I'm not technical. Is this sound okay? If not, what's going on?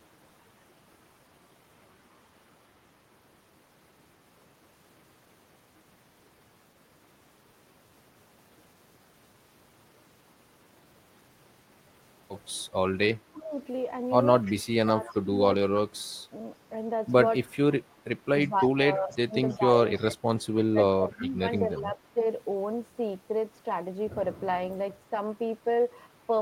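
No. Speech suppressed in double talk at 13.09–13.54, 14.59–16.22 and 18.48–22.18 s: the voice dips or drops out, likely because both sides spoke at once and the echo canceller turned everything down. Echo leak at 14.43–15.15, 17.9–19.99 and 21.76–21.80 s: a faint copy of the voice returns about 0.3 seconds late, likely from a loudspeaker echo the canceller missed.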